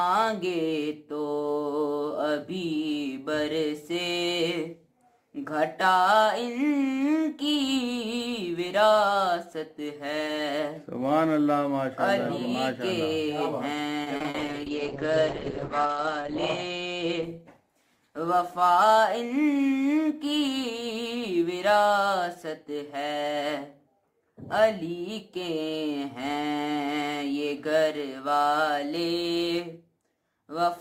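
From 14.03 to 14.36 s there's a burst of repeated packet loss, which gives that robotic sound. Packets kept going missing in quick succession. Each hole got patched by stretching out the last bit of audio, and then another hole arrived right behind it. Roughly 40% of that third of a second is concealment, with gaps up to 40 ms long, so it comes across as choppy with little pieces dropped out.

Right after, at 14.39 s, a call bitrate drop kicks in and runs to 19.67 s. The bandwidth estimate evidently collapsed. The sound points to the encoder going from something like 96 kbps down to around 9 kbps. The top end is clearly chopped from 20 kHz down to 8 kHz, and the coarser coding makes everything rough and a bit watery. It sits at its worst for about 1.7 s before things climb back.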